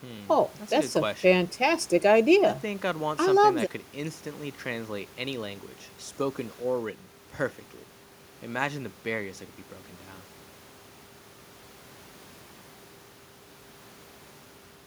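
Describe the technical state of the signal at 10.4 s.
The signal at 10.4 s is intact, with no audible fault at that moment.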